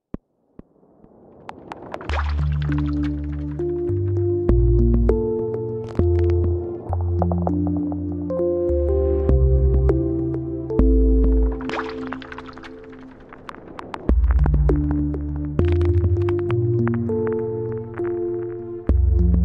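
No technical faults are audible.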